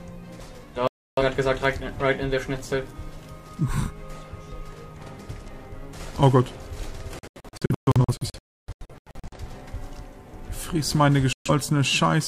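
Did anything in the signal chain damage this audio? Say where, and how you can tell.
Yes: a digital broadcast dropout at the reception and decoding stage mutes the audio from 0.88 to 1.23 s and from 11.33 to 11.51 s, with scattered holes from 7.19 to 9.38 s. The receiver silenced frames that failed checking until clean ones returned, and that programme is lost.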